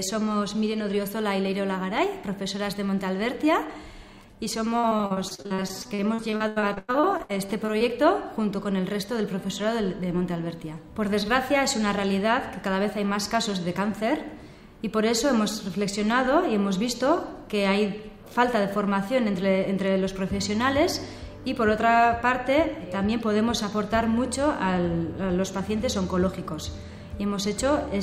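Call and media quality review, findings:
Repeated packet loss (robotic sound), 4.79 to 7.82 s. Choppy audio with dozens of dropouts up to 100 ms. Jitter buffer concealment stretches prior sound across roughly 30% of the span.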